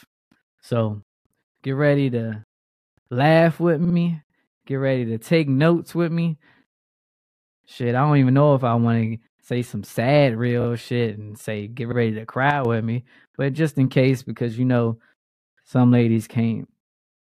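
At 3.84 to 3.95 s, 10.61 s and 11.91 s, the speech stutters. These are repeated frames: a short compressed block replays. The first is a 52.2 ms block played twice more, adding 104.5 ms. At 10.61 s a 26.1 ms block repeats twice, adding 52.2 ms. At 11.91 s a 52.2 ms block repeats once, adding 52.2 ms.

From 12.51 to 12.65 s, the level drops abruptly by about 6 dB and then returns. This fits one channel dropping out before the mono sum. The likely cause is a lost stereo channel, which halves the shared signal.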